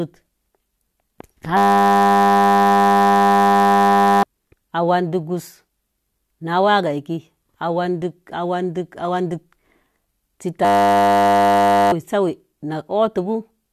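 System hang loop at 1.57–4.23 s and 10.65–11.92 s in this speech: the driver stalled while the hardware replayed one 10 ms buffer, giving a steady 100 Hz buzz and losing roughly 3 s and 1.5 s of audio.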